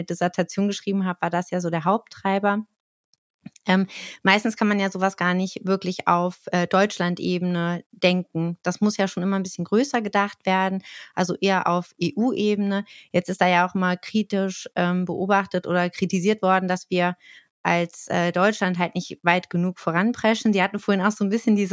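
No faults in this speech; it shows only the expected call microphone processing, with the lowest bass filtered off and nothing above 8 kHz.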